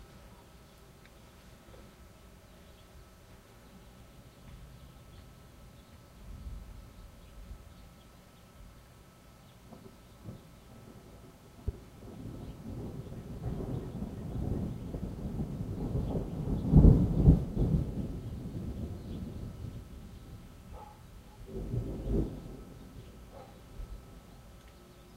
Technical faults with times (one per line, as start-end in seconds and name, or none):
11.68-11.71 loud pop